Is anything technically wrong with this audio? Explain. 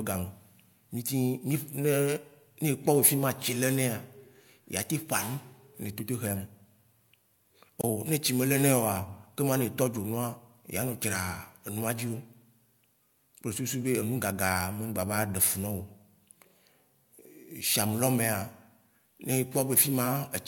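Yes. At 7.81 to 7.84 s the speech is broken by a gap at a join of encoded pieces, a silence of about 25 ms. The audio appears to have been encoded as separate segments and spliced without trimming, so one encoder's end-of-stream padding and the next encoder's start-up delay both remain at the seam. It sounds like a brief dropout with smeared edges, after which the speech resumes exactly where it left off.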